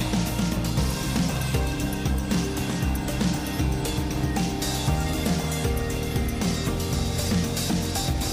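No technical faults are audible.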